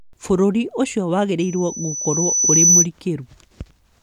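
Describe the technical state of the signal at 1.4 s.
At 1.4 s a loudspeaker feedback squeal is just getting going, and it runs to 2.87 s. The mic is hearing its own speaker, the loop gain tops one at 6 kHz, and that tone swells over a second or so to sit about 10 dB above the speech.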